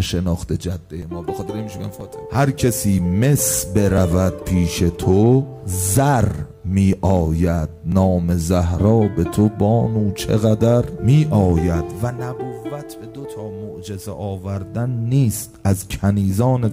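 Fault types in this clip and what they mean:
Overlap between stream segments: tiny clicks or skips at 1.02, 2.01, 4.96, 5.95, 6.93 and 7.92 s, each near a 1-second segment boundary. Neighbouring segments claimed a few milliseconds of the same time, and the player discarded that overlap as a duplicate even though the audio was not really repeated. Between about 5 and 19 ms of genuine sound vanishes at each join, so the waveform jumps abruptly.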